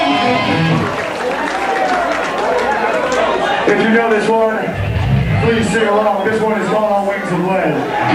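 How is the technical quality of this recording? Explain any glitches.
The recording carries a steady mains buzz from start to finish. Switching spikes from a dimmer, rectifier or poor shielding enter the path twice per 60 Hz cycle, producing a raspy drone roughly 30 dB below the sound. A spectrogram shows evenly spaced horizontal lines at 60 Hz multiples reaching several kHz. The waveform carries a faint periodic ripple.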